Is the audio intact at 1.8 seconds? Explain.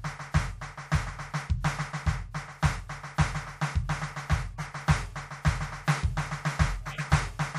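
Yes, the music plays through cleanly at 1.8 seconds, with no audible dropout, click, distortion or other fault at that moment.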